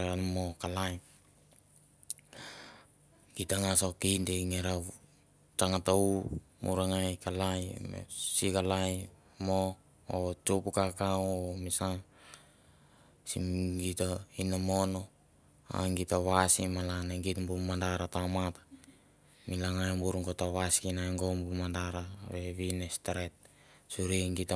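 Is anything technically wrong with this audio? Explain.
No, nothing technically wrong can be heard in this speech recording. There is no point in the clip where the signal itself calls for comment.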